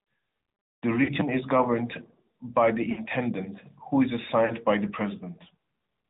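Speech passed through the AMR narrowband mobile codec: nothing above 4 kHz, and a plainly buzzy, synthetic edge that fits a mid-range rate near 10 kbps. Lost AMR speech frames produce short smeared warbles at 1.04–1.1 s, 2.92–3.02 s and 4.46–4.53 s, lasting 40, 60 and 40 ms, as the decoder repeats its last good settings with falling gain.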